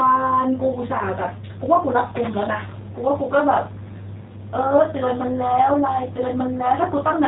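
From start to finish the speech carries the sound of the G.729 codec, and the damage is plainly audible. Everything above 4 kHz is gone, so it's dull and boxy, and the voice comes out a bit rough and synthetic, as if rebuilt from a filter and a few pulses rather than passed through. That fits a G.729A stream at around 8 kbit/s, the usual low-rate VoIP setting.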